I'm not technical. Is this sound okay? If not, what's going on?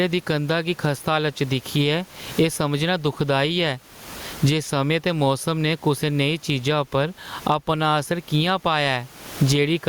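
No. Throughout the speech there is gain pumping. The level of the recording keeps rising and falling on its own, pulled down each time the talker speaks. The swing is large, and loud and quiet passages end up squashed toward the same level. The likely cause is the microphone input set far too high, with an automatic limiter repeatedly pulling it back down. The room noise itself is faint and part of the recording.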